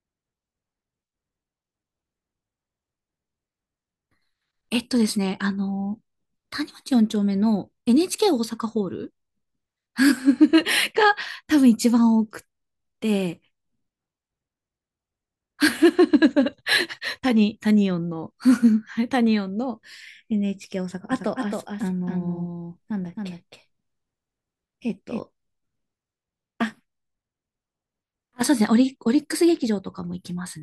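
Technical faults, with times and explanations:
21.12 to 25.2 s, doubled audio track: the speech gets a dry, full-band second copy trailing by roughly 300 ms, around 5 dB down, with no room tail, and it cuts in and out abruptly. Likely a slower second capture path mixed back in.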